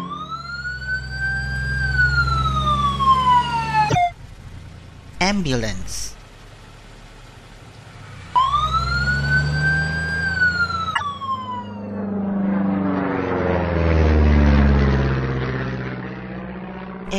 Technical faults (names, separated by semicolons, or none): damaged data in a compressed stream